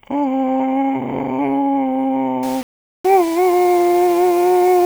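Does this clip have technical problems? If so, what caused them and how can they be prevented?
Yes. From 2.43 s to the end, the music goes grainy, with gritty distortion that follows the sound and sits roughly 20 dB down. That's likely low bit depth without dither, rounded to 5 bits. Keep more bits and dither when reducing word length.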